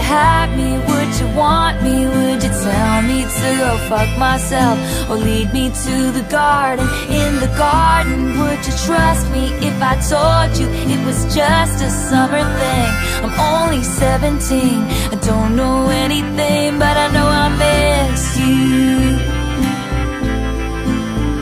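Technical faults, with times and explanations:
No technical faults can be heard anywhere in this clip.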